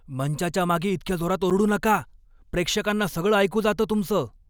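At 1.50 s, between "मंचाच्या मागे इतक्या जोरात" and "नका प्रेक्षकांना सगळं", the speech drops into a block of digital silence lasting 8 ms. The output buffer likely went unfilled and was replaced with zeros, so the signal snaps to nothing and back with no fade. It sounds like a single sharp tick. On a waveform it shows as a flat line near zero between abrupt edges; a spectrogram shows a thin blank column bordered by broadband vertical streaks.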